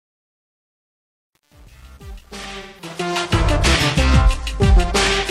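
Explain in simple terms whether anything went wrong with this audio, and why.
Something went wrong in two places. First, the fade-in that runs from the start to about 3.19 s passes through a digital volume stage that keeps too few bits and adds no smoothing noise (dither), which fits a stage working with only about 8 bits. This is truncation distortion on a fade. While the level is low, the waveform collapses into a few coarse steps, so from 0.0 to about 2.79 s the rising sound is gritty, and it clears up only as the fade nears full level.

Second, from 2.61 to 2.89 s, a short stretch of the compressed AAC stream went missing, which fits about four lost frames, roughly 0.17 s in all. This is AAC frame loss with concealment. The decoder could not simply leave a gap, so it filled the hole by guessing from the last good sound it had. That guess gives a brief smeared, noisy, slightly hollow patch where the real sound should be, landing inside the already gritty end of the fade.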